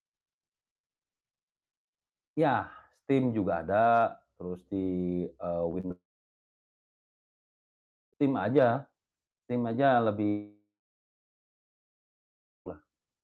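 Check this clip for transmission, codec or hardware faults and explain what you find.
Two kinds of transmission fault are present: a burst of short concealed packet losses, and two long gaps in the audio.

Short concealed packet loss occurs at 5.71–5.75 s, 5.81–5.85 s and 5.87–5.91 s. Each time roughly 20 ms of speech, which fits one lost packet, failed to arrive. The receiver bridged each hole by extending the preceding sound, so you hear quick smears or wobbles clustered together.

Long network dropout is the likely cause of the silences at 5.91–8.15 s and 10.29–12.68 s. At the first, a brief fading continuation gives way to about 2.1 s of silence. At the second, a longer decaying fill precedes about 2.0 s of silence. In both cases the speech resumes with the intervening stretch missing. The Opus coding underneath limits the top end to around 12 kHz.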